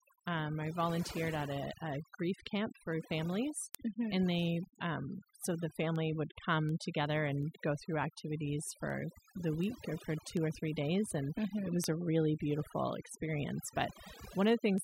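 From the start the speech has overdone noise removal: the background sinks to near silence with twinkling specks, and the voice loses its quieter parts as those bands get cut away. Right after "um I", at 0.80 s, word clock ticks begin, roughly one every 0.7 s through 14.78 s. They're sharp, uneven ticks, which fits an unlocked digital link whose clocks drift apart by something like 30 ppm, so a sample slips each time.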